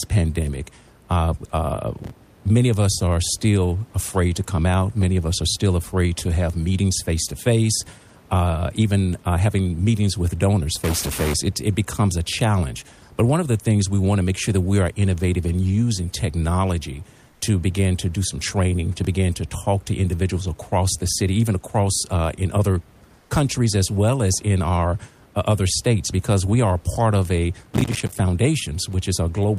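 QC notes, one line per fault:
1.98–2.46 s (just before "many of us are") and 27.64–28.20 s, processor overload crackle: the processor repeatedly missed its deadlines for small audio buffers, and each miss was filled with silence. Dozens of tiny hard-edged dropouts, spaced in a way that fits buffers of about 5 ms, pile up into a gritty tearing crackle that stops once the load eases.
10.84–11.34 s (after "having meetings with donors"), stuck bit: the distortion sounds like one data bit being held fixed, likely from a faulty line or converter. Roughly half the sample values are shifted by that bit's weight, following the waveform, for half a second.
17.31–17.41 s (between "innovative in using technology" and "to begin to do") and 23.19–23.29 s, comfort noise in place of the background: for 100 ms each time, the real room noise, which sits about 36 and 34 dB below the loud parts, is swapped for smooth synthetic noise about 4 dB quieter. 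This is likely discontinuous transmission filling pauses with generated noise, and it sounds like a brief flat dip in the background.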